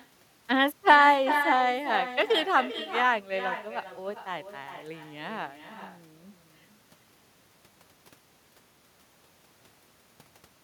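Throughout, every phrase is trailed by a quieter, thinner copy roughly 0.4 s later, about 9 dB down: echo with no canceller, the far end's loudspeaker feeding its microphone.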